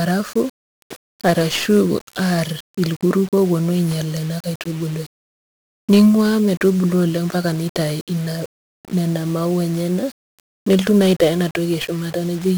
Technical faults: 1-bit DFPWM compression

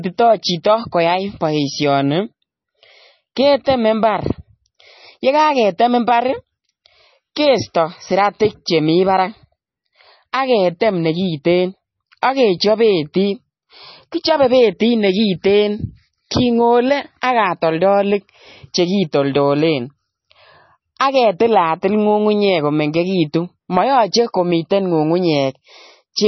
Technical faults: MP3 compression; pre-echo

